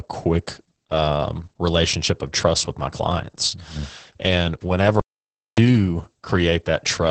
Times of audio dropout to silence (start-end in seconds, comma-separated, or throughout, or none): 5.00-5.58